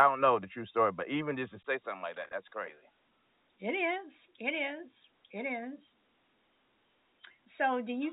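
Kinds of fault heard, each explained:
input switched to a poorer device: The recording input likely changed to another microphone or headset profile at 1.63 s. After a 20 ms silence, the sound turns duller, drops about 5 dB in level, and gains a new noise floor roughly 50 dB down.
packet loss with pitch repetition: Audio packets went missing between 2.25 and 2.33 s, 50 ms lost in scattered gaps over 80 ms, none longer than 20 ms. The receiver filled each gap by repeating the last pitch period, so that moment sounds briefly held and buzzy.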